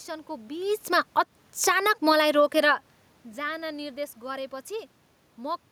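From 0.89 s to 2.36 s, automatic gain falling pulls the speech down by about 5 dB as the gain control, judging the input too loud or its background noise too strong, gradually lowers its gain. The room noise sinks along with the voice, which sets it apart from the talker's movements near 0.5 s and 2.5 s.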